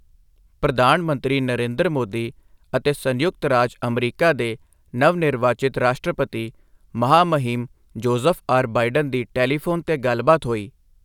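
No technical faults can be heard anywhere in the recording.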